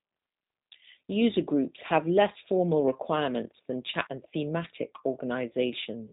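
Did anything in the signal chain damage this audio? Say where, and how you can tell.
Yes: the G.729 codec, at what sounds like 8 kbit/s, rebuilt the speech from filter and pulse models, leaving it rough and synthetic throughout, with nothing above 3.8 kHz.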